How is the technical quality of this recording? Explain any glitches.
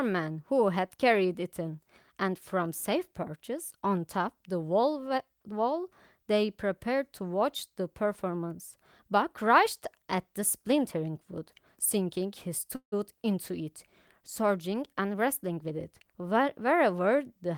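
The recording has two network-related glitches close together near the end, a short freeze and then a spell of rushed playback.

At 12.75 s there's a call audio freeze lasting about 0.19 s. The sound stalls into a brief fading buzz or hiss, then drops to silence for roughly 100 ms before picking up exactly where it left off. That pattern most likely comes from packets getting held up in transit so the jitter buffer ran dry. The receiver padded the gap with about 167 ms of filler, so nothing is actually lost. The audio just arrives that much later.

From 15.14 s to 16.61 s you get a jitter buffer speed-up. Once the late packets catch up, the buffer is holding more than it wants, so the receiver trims tiny pitch-period-sized slices over and over to claw back the delay, somewhere around 150 ms in total. The speech runs at about 109% speed with the pitch unchanged, so it comes across as hurried rather than squeaky.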